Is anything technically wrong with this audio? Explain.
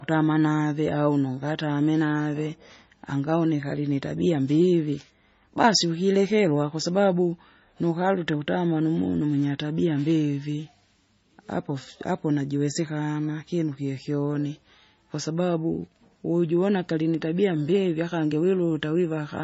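Yes. The likely cause is heavy MP3 compression at a very low bitrate, around 24 kbps, throughout the speech. Short of bits, the encoder cuts everything above 7.6 kHz and drops weak frequency lines that flicker between frames, so the sound is dull, watery and swirly, with smeared onsets.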